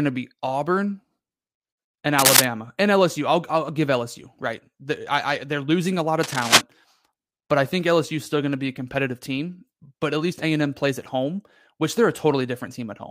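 From 2.19 to 2.45 s and again from 6.23 to 6.61 s, cable scratch noise cuts across the speech: dense, ragged bursts of scratching, about 5 dB above the speech. The likely cause is a worn cable or connector being moved, its contact resistance fluctuating rapidly.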